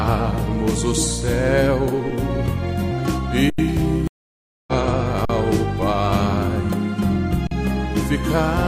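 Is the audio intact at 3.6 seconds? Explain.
No. An underrun with held sample runs from 3.50 to 3.58 s: the output buffer emptied and the converter froze on its last value for about 85 ms, a gap of 4096 samples. Unlike a dropout to silence, the waveform flatlines without a sharp click, and nothing is lost, so playback resumes softly just before 3.6 s.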